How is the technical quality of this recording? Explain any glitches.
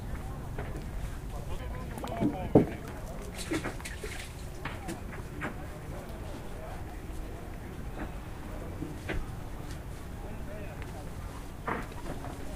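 The recording has three brief glitches from damaged data in a compressed stream, at 0.94 s, 5.20 s and 8.98 s. Corrupted bytes make the decoder misread frames and resync, causing a chirp, click or short hole.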